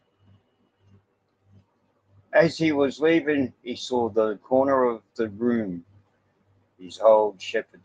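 Nothing in this bit of speech stands out as a technical fault, so there's really nothing to flag here.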